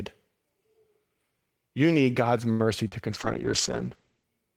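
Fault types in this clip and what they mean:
Short stall from a late packet: At 2.51 s the speech freezes on one sound, held for about 81 ms until 2.62 s with a faint buzzy sustain. Nothing is skipped afterwards, and the talk resumes exactly where it paused. A packet arrived late and the jitter buffer ran dry, so the receiver kept extending the last sound. Playback then continued from the same point, leaving everything after it running 81 ms later than before.
Short concealed packet loss: Around 2.87 to 2.94 s there is a brief smeared wobble lasting about 40 ms, and the original audio in that span is gone rather than delayed. The decoder never received that piece of the call in time. It improvised a fill by carrying the preceding sound forward, using its pitch where voiced and shaped noise otherwise, then crossfaded back into the genuine speech.
Call bitrate drop: From 3.14 s to 4.33 s the speech turns muffled and rough, losing its crisp top end and picking up a slightly watery texture. 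It stays at its worst for about 1.1 s. The estimated bandwidth of the call fell, and the encoder was pushed down from 32 kbps to 10 kbps. At that rate it coded more coarsely and cut the audio bandwidth from 20 kHz to 8 kHz.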